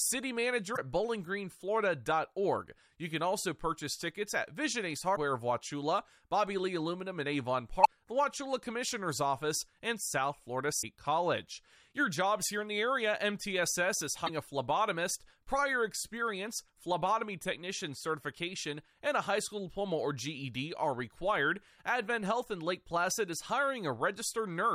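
Damaged data in a compressed stream hits the speech at 0.73–0.79, 5.13–5.17, 7.81–7.87, 10.79–10.84 and 14.25–14.30 s, just before "a phlebotomist prior experience". Each is a roughly 50 ms glitch where corrupted frames derail the decoder until it resyncs. On a spectrogram, each shows as a narrow vertical disruption, and on the waveform as a brief discontinuity.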